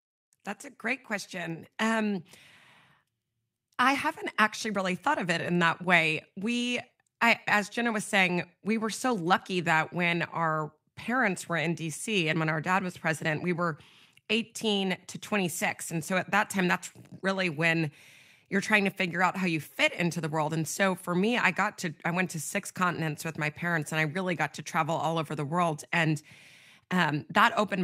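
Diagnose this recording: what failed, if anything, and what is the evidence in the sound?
Nothing here failed: the speech runs without a single dropout, click, glitch or other defect anywhere in the recording.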